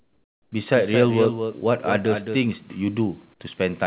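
From 0.00 to 0.52 s, discontinuous transmission likely paused sending, so comfort noise replaces the background: a flat, featureless hiss about 15 dB quieter than the real room. From 0.74 to 2.44 s, a second capture path likely feeds a doubled audio track: a copy a few dB quieter trails about a fifth of a second behind, starting and stopping abruptly, and, like everything on this call path, cut off above 4 kHz.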